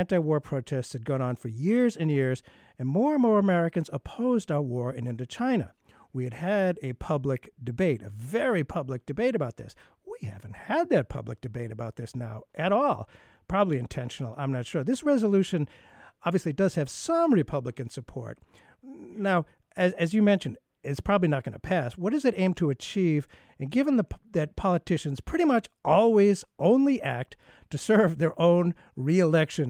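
A speech recording, and nothing is technically wrong with it.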